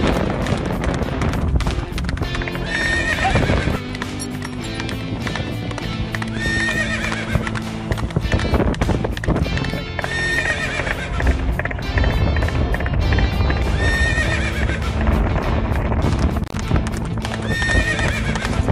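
At 16.44 s an intermittent contact interrupts the sound until 16.56 s. A loose cable or plug opened for a moment. The signal path was broken for about 68 ms. The sound drops out or breaks up, with crackle as the contact opens and closes.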